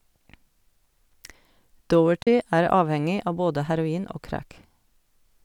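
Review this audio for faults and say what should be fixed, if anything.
The speech drops to silence from 2.22 to 2.27 s, then resumes further on, as though it kept playing. This is a Bluetooth dropout, likely from packets reaching the headphones too late and being discarded. About 37 ms goes missing, which fits two lost packets. Keep the headphones close to the source and away from wireless interference.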